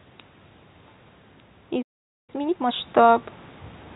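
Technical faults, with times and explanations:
1.70 to 3.26 s, automatic gain rising: the speech and the room noise behind it swell together over about a second and a half. The input had dropped by about 14 dB, so the automatic gain control slowly raised its gain by about 6 dB to compensate.
1.82 to 2.30 s, playback stall: the speech cuts off mid-flow into silence for about 0.46 s, then resumes. The likely cause is the player running out of buffered data, or its thread being blocked, so it had nothing to output until it recovered.
2.30 to 2.74 s, time-compressed catch-up: just after the gap the speech rushes along at twice normal speed while keeping its normal pitch. The player was clearing its backlog by cutting out small slices and cross-fading the remaining pieces together.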